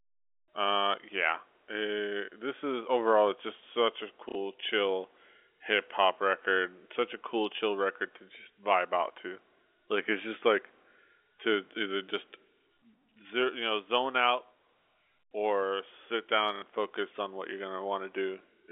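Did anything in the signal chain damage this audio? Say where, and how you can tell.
Yes, at the network stage: packet loss with last packet repeated, at 4.29 to 4.35 s and 16.56 to 16.62 s. Each 60 ms gap, which fits two lost packets, is filled by replaying the last one, giving a short robotic stutter. The waveform shows identical repeated blocks, and the spectrogram shows a brief repeated pattern inside the 300 Hz to 3.5 kHz telephone band.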